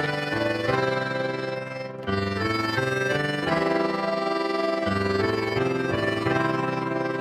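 Overlap-add ripple runs throughout: frames were rejoined with uneven overlap, so level pulses about 6 dB around 20 times a second, a fast flutter showing as regular waveform scalloping and striped spectrogram bands.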